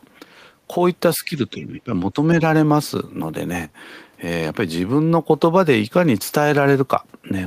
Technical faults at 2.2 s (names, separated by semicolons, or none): speech suppressed in double talk